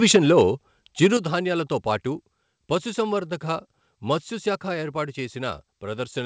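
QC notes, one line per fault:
0.03–0.41 s and 1.02–1.07 s, microphone overload: input gain was likely set too high, driving peaks about 6 dB and then about 5 dB past the converter's ceiling. Their tops are flattened, a small share of samples in the first stretch and a clearly larger share in the brief second one, adding a harsh crackle to the loudest syllables.
0.16 s and 1.17 s, microphone volume stepped down: the call software likely detected the clipping and cut the device's input gain in one step, by about 4 dB and then about 6 dB. Speech and background drop abruptly in level each time, right within or shortly after the distorted stretch.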